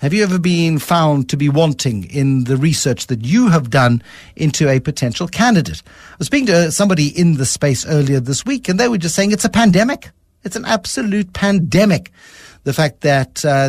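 Across the speech recording there are no technical faults to point to, with the signal holding steady and continuous throughout.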